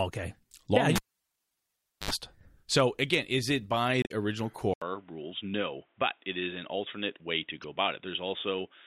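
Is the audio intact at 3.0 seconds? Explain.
Yes, the audio is intact at 3.0 seconds, with no fault audible at that moment.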